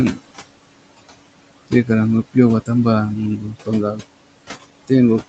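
Noise suppressor artifacts run through the whole clip. The suppressor estimates which frequency bands hold steady room noise and pulls them down frame by frame, here by about 21 dB. The room noise, sitting about 14 dB below the speech, therefore drops away in the gaps and swells back whenever speech starts. On a spectrogram the background appears as patchy, flickering specks that vanish between phrases, while the waveform shows near-silent pauses with abrupt noise-floor jumps at speech onsets. Nothing appears above 8 kHz anywhere, which fits the band limit of the call path.

From 3.38 to 3.69 s comes speech cut by the noise suppressor. The suppressor mistakes quiet parts of the speech for background and turns them down along with the noise, by up to about 10 dB. Roughly a tenth of a second across that span is affected, so soft consonants or tails sound swallowed and faint. A spectrogram shows the weak high-frequency energy of those sounds thinning out or gapping. 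The waveform shows the envelope dipping sharply there instead of tapering naturally.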